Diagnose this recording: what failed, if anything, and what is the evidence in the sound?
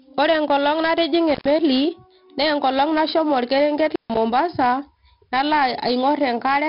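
The codec stage failed. The speech carries 4-bit ADPCM compression throughout, and the damage is heavy. A gritty hiss rides on every loud syllable and rises and falls with the level. Sharp onsets distort because the adaptive step cannot grow fast enough to follow them. Nothing is present above 5.3 kHz, so the speech sounds dull. That cut-off points to a low sample rate, which fits a stream of about 44 kbps.

The analogue wiring also failed, with an intermittent contact at two points. The first is from 1.30 to 1.51 s, and the second is from 3.88 to 4.18 s. In each, the speech cuts out with crackle at both edges. The line stays open for about 109 ms the first time and about 141 ms the second. A loose plug or cable breaks the circuit briefly and then reconnects.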